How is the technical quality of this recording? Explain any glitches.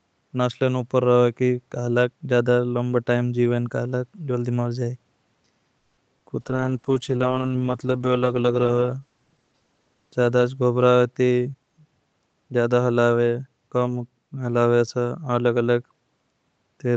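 The recording has four call-related glitches, all between about 5.8 and 12.5 seconds.

At 5.79 to 5.99 s the sound stalls into a fading buzz or hiss for about 180 ms, then resumes where it stopped. This is likely a call audio freeze: delayed packets emptied the jitter buffer.

At 6.19 to 6.22 s comes short concealed packet loss. About 20 ms never arrived in time. The receiver extended the previous sound briefly, leaving a small smear.

From 6.42 to 11.92 s a call bitrate drop takes Opus from 48 to 9 kbps, bottoming out for about 2 s. Coarser coding makes the speech rough and watery.

At 11.16 to 12.49 s a jitter buffer speed-up trims roughly 150 ms of pitch periods to shed backlog. The speech runs about 12% fast at unchanged pitch and sounds hurried.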